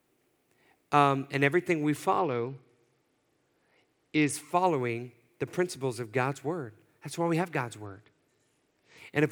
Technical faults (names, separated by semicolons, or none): Bluetooth SBC bit pool drop